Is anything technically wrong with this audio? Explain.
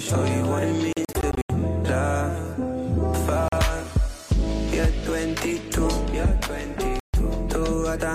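Yes. The likely cause is Bluetooth dropout: audio packets failed to reach the headphones in time and were discarded, so the output fell silent until good data arrived, then resumed as if the sound had kept playing. Between 0.93 and 1.50 s, roughly 244 ms vanishes in scattered bursts, the longest gap 81 ms. A brief 41 ms hole hits at 3.48 s, and a 142 ms gap runs from 6.99 to 7.14 s, each with a forward jump in the audio.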